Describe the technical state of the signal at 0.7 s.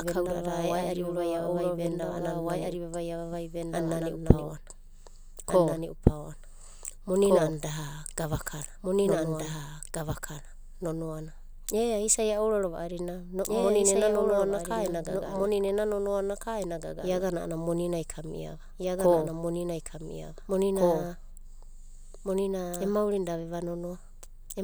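A doubled audio track runs throughout, likely from a second capture path holding a copy about two seconds late, so at 0.7 s speech overlaps an equally loud, dry repeat.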